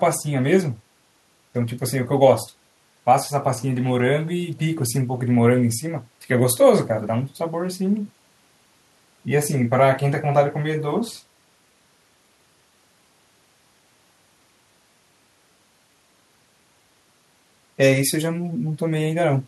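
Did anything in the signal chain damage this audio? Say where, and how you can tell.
No, nothing in the signal chain audibly damaged this speech recording. No stage, from capture through to playback, leaves a mark that can be heard here.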